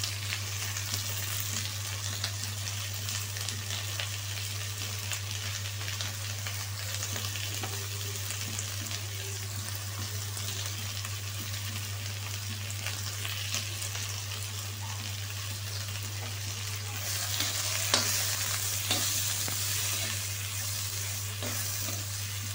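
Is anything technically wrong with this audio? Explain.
Yes. Clock drift buffer slips are the likely cause: two mismatched clocks, off by a few hundred parts per million, force the buffer to drop or repeat a handful of samples. From 0.62 s to 22.39 s this makes about thirty regular clicks, one every 0.66 s, while sound is present.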